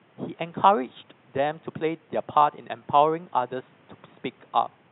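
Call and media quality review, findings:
No call or media quality findings for this speech; the room noise sits about 35 dB below the talker.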